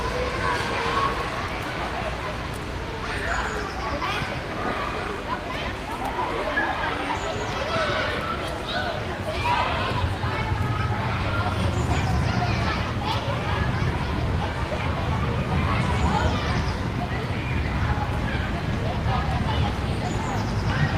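No faults are audible anywhere in this recording of sounds, and nothing in it calls for correction.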